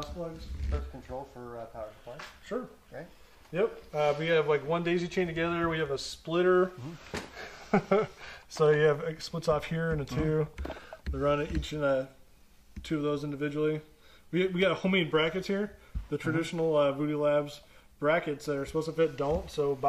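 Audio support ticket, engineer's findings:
Nothing stood out on listening, with no symptom found that would point to a faulty component.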